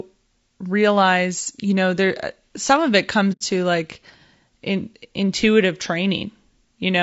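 Throughout this speech recording the voice sounds rough and grainy, with a hiss-like fill between the harmonics and a top end that seems thin and synthetic. That plainly audible roughness is likely low-delay AAC compression of the AAC-ELD kind used in video calling. It works in short low-delay frames, and at a modest rate, which fits around 32 kbps, the encoder fills the gaps between harmonics with noise and rebuilds the upper band instead of coding it. From 3.32 to 3.42 s the sound fades out and back in, leaving a soft-edged hole of about 0.1 s. This is AAC frame loss with muting: the decoder replaced a short run of missing frames with silence, consistent with three frames, and its overlapping windows smoothed the edges of the gap into short fades.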